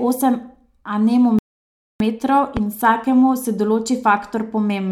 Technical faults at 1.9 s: playback stall

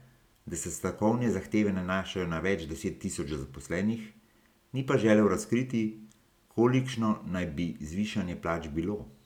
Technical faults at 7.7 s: none

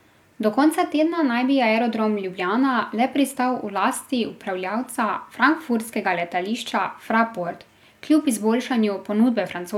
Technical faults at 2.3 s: none

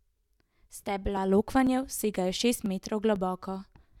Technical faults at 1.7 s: periodic USB or driver dropouts

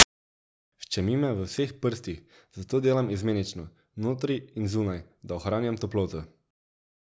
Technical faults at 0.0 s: file tags played as audio

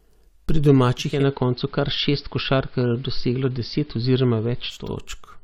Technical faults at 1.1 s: digital radio blending to analogue

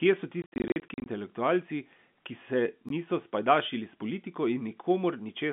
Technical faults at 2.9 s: block of digital silence

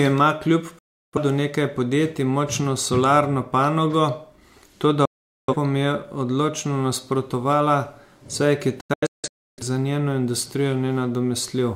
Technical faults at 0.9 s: digital broadcast dropout

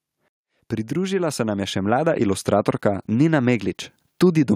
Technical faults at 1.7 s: automatic gain rising

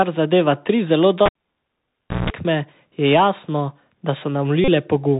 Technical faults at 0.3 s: Bluetooth CVSD headset codec

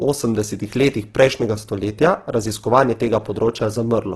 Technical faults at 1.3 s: Opus compression

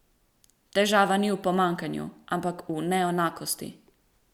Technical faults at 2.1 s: none

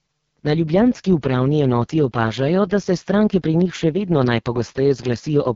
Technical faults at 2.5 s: AMR wideband (HD Voice) codec

